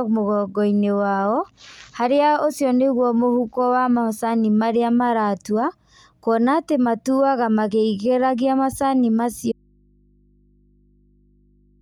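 A speech recording whose sound cuts off abruptly at 9.52 s and never returns; from there to the end of the clip only a low mains hum remains, sitting roughly 40 dB below the level the speech had. The change is sudden rather than a natural pause or fade. This is an audio dropout to a faint residue, likely caused by the wanted signal being lost upstream while the rest of the chain stayed live, so the open input kept passing hum.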